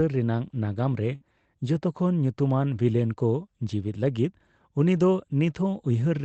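From 1.15 to 1.23 s, a burst of packet loss hits the speech. The last sound is held and fades out, then 60 ms is skipped.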